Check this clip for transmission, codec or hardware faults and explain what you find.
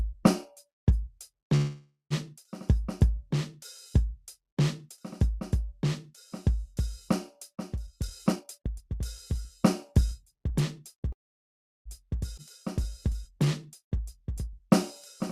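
The clip has transmission faults: two freezes, two speed-ups, a skip and a slow-down in this music.

Call audio freeze, 1.55 to 2.13 s: the music stops and the last sound carries on as a fading tail for about 550 ms, ending in roughly 130 ms of silence. This is likely from packets held up in transit, so the jitter buffer ran dry. Playback then resumes where it left off.

Jitter buffer speed-up, 7.86 to 8.95 s: after the backlog, the receiver trimmed short pitch-period slices, removing around 300 ms. The music runs at 127% speed with unchanged pitch and sounds clearly rushed.

Jitter buffer speed-up, 9.92 to 11.10 s: a gentler trim of about 70 ms at 105% speed. The tempo pushes forward slightly.

Call audio freeze, 11.12 to 11.88 s: a 730 ms gap, almost entirely silent (about 710 ms), likely another buffer underrun. The music picks up from the same point.

Skip ahead, 12.37 s: roughly 400 ms of music is dropped. 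Playback jumps forward through a very short join, about 8 ms long.

Jitter buffer slow-down, 12.84 to 14.59 s: repeated pitch periods add 60 ms to rebuild the reserve. The music drags at 97% speed while keeping its pitch.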